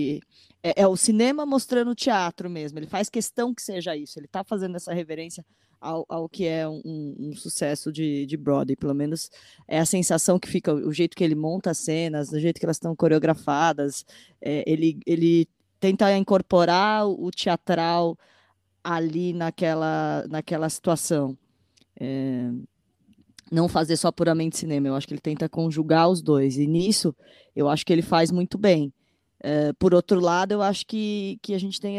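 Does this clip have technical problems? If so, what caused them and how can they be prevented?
No, nothing technical goes wrong anywhere in this speech clip, so there's no cause to track down and nothing to prevent.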